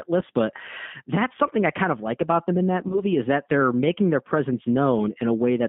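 All the way through, the speech has that narrow, slightly synthetic G.729 codec sound, with nothing past about 3.6 kHz and audible roughness, which fits an 8 kbit/s VoIP link. Around 2.88 to 3.00 s, between "about them in that" and "is that they're making", there's VoIP packet loss concealed by the speech codec: the decoder papers over roughly 20 ms of missing audio by stretching what came before into a fading buzzy tone or coloured noise, and the speech stays weak or distorted until it recovers.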